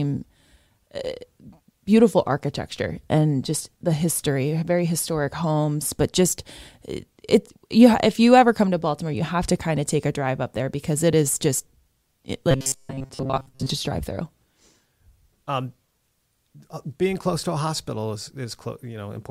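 From 12.51 to 13.71 s the speech turns into robotic sound from repeated short buffers: a rigid, metallic buzz locked at 134 Hz that still roughly tracks the syllables. The likely cause is audio arriving too seldom, so playback loops a slice of about 7.5 ms, filling most of the stretch with repeats while real audio is skipped. Unlike a plain dropout or stutter, the fixed, unnatural pitch gives it away.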